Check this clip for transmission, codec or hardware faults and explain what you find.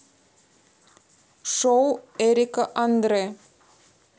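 No transmission, codec or hardware faults are audible anywhere in this speech recording.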